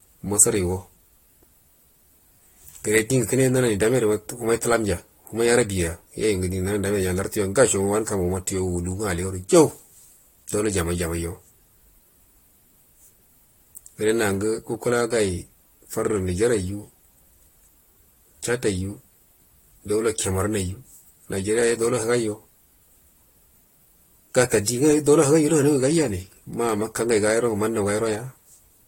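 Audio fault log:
throughout: generation loss, likely from about three successive AAC passes at around 64 kbit/s; the speech sounds swirly and hollow, with smeared attacks and nothing above 16.6 kHz.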